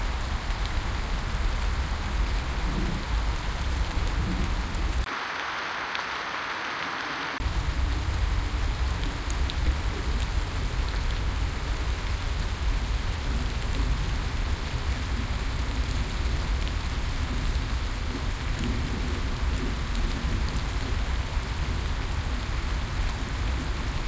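From 5.04 s to 7.40 s the sound turns duller and quieter, by about 5 dB. Nothing remains above 6.4 kHz, narrower than the 8 kHz of the G.722 call path. A new noise floor sits about 40 dB down. A 20 ms silence marks the switch. The likely cause is an input switched to a poorer device.

At 9.66 s the audio skips ahead. Roughly a second of sound is missing. Nothing fills the gap. The two sides join directly, so the sound jumps forward.

From 9.90 s to 14.45 s, and again from 18.54 s to 22.10 s, a jitter buffer speed-up occurs. The receiver drops short pitch-period pieces to cut delay. Playback runs at 101% speed, same pitch. About 50 ms and 40 ms are removed.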